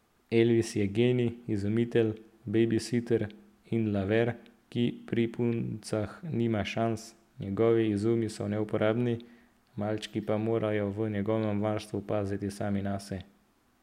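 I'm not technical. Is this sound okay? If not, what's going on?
Yes, there's nothing wrong with this one, so you can relax.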